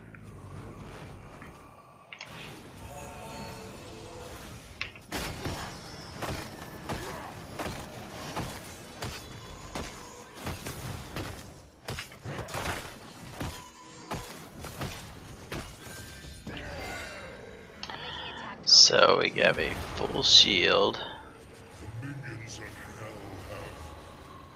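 Nothing here stands out as a technical problem; the audio runs along without any audible glitches or defects to point to.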